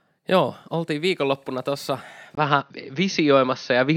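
Right after "oltiin viikonloppuna tuossa", at 2.35 s, there's a tiny gap of about 20 ms, and then the speech comes back duller and boxier through to the end. That's most likely an input switched to a poorer device: the recording jumped to a lesser microphone or headset path. Nothing gets through above 6.4 kHz now, the level shifts by around 5 dB, and a faint new noise floor sits well below the speech.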